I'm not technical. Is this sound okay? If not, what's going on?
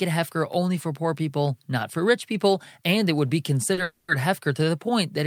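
No. At 3.73 s there is a short stall from a late packet: a piece of the call arrived late, so the receiver stretched the last sound for about 40 ms, until 3.80 s, then carried on. Nothing is lost, but the sound briefly hangs.

Right after, from 3.83 to 4.11 s, comes a call audio freeze. The likely cause is data held up on the network. The receiver fills about a quarter of a second with a fading buzzy continuation of the last sound, without going fully silent, then resumes with nothing missing.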